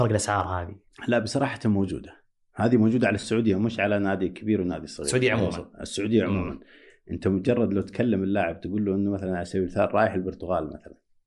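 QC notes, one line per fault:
Throughout: Bluetooth LC3 compression. The speech has a plainly audible breathy, grainy edge in the upper band, where high-frequency detail is replaced by noise-like fill. This likely comes from LC3 coding, and the damage level points to a moderate bitrate of around 48 kbps with 10 ms frames.
3.20–3.23 s: lost LE Audio frames. A 30 ms stretch of the speech turns into a brief noisy smear. This fits three consecutive 10 ms frames going missing, with the decoder repeating the last spectrum with randomised signs to conceal the gap.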